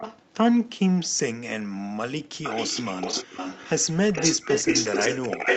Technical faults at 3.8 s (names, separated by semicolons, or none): echo leak